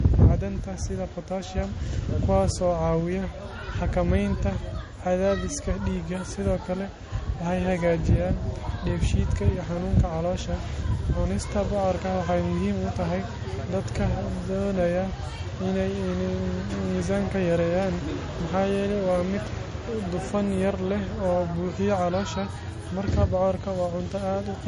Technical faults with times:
0.00-24.67 low-bitrate audio saved at a high bitrate

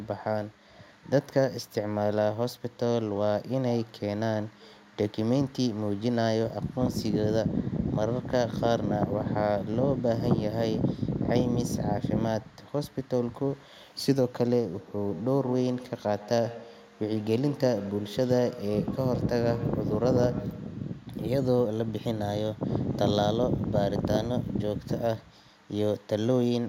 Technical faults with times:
14.79-21.10 feedback echo between two devices

